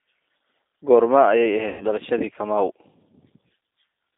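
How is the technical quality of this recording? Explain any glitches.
Technical quality is limited: the speech passes through a low-bitrate phone codec and drops out twice.

The G.729 codec colours the whole clip. At 8 kbit/s it rebuilds each frame from a vocal tract model and a few pulses. The band sits near 250 Hz to 3.7 kHz, so speech sounds thin, slightly rough and synthetic.

VoIP packet loss concealed by the speech codec occurs at 1.68 to 1.85 s and at 3.48 to 3.51 s. The first gap is about 120 ms, which fits six lost 20 ms packets. The second is about 20 ms, one packet. The decoder stretches its last pitch and filter and fades them. This gives a brief buzzy tone or coloured noise before the speech recovers.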